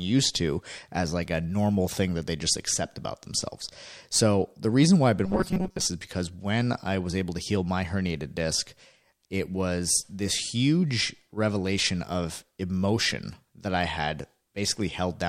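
From 5.26 to 5.85 s, after "the reason why I've", late-arriving audio likely forced short buffers to repeat, producing robotic sound: a rigid, metallic 188 Hz buzz.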